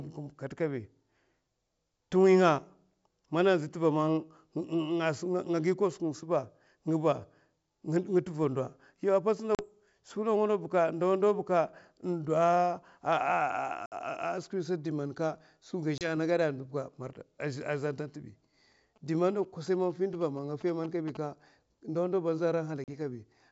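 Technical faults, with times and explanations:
9.55–9.65 s, 13.86–13.98 s, 15.98–16.10 s and 22.84–22.89 s (just after "ndawa ndaw ba aza"), packet loss on an ADPCM call: hard-edged silent holes of about 40, 60, 30 and 40 ms, each a handful of lost packets. Unlike a clean dropout, the speech comes back slightly distorted. The G.722 decoder's predictor and step size lost track of the sender's during each hole and take some tens of milliseconds to realign.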